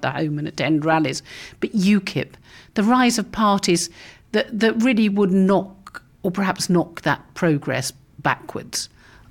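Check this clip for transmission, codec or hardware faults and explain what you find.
No transmission, codec or hardware faults turned up in this speech clip.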